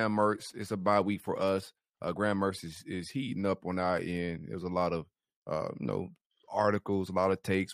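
At 1.60 to 1.62 s the speech carries a corrupt frame decoded: damaged bits in what sounds like a couple of compressed frames were played anyway, scattering energy into wrong frequencies. It is heard as a faint chirp, squeak, blip or burst of noise peaking at about -40 dBFS, visible on a spectrogram as a brief misplaced smear.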